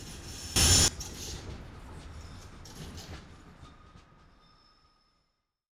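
From 0.56 to 0.88 s, a sudden gain jump, likely an unramped gain change, lifts sound and noise together by about 19 dB. The waveform steps abruptly taller and the spectrogram brightens.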